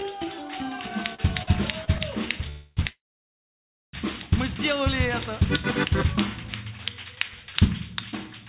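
From 0.9 to 2.01 s there's a run of repeated stalls (stutter): five short hiccups, the longest about 48 ms, where the jitter buffer kept running dry and the receiver stretched the last bit of sound to cover. Nothing's lost, but it drags and catches.

Then come two call audio freezes, likely from packets held up in transit. At 2.49 to 2.79 s the last sound is carried on as a buzzy smear for about 0.27 s. From 2.89 to 3.95 s it fades almost straight to silence, leaving roughly a second-long hole before the audio resumes where it left off. Throughout, nothing comes through above 4 kHz, which fits a narrowband call codec.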